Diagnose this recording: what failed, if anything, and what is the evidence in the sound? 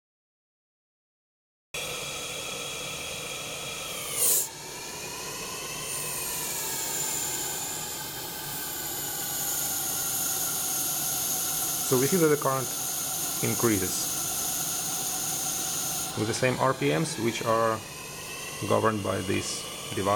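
Cut-off start: recording began late at the buffer stage. Digital silence runs to 1.74 s, then sound enters mid-event with no natural attack or fade.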